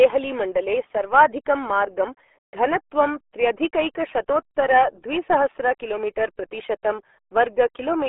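From start to finish the speech sounds muffled and gargly, squeezed into a narrow telephone-like band of roughly 300 Hz to 3.4 kHz, with nothing at all above about 3.7 kHz and a wet, bubbling smear. This is the RealAudio 14.4 codec, RealAudio 1, built for dial-up modems. Its coarse modelling of the voice leaves heavy codec damage, a level of degradation that fits a bitrate of only about 8 kbit/s.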